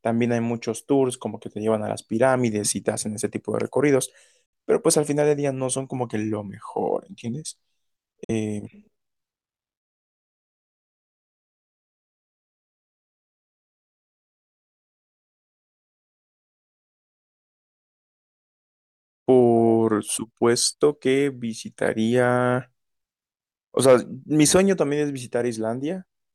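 At 4.46 to 4.53 s and 8.24 to 8.31 s the speech cuts to silence for roughly 70 ms and 46 ms, likely a Bluetooth dropout where late packets were discarded. Each gap shows as a flat waveform and a blank vertical band across the spectrogram, with the speech resuming as though it had played through.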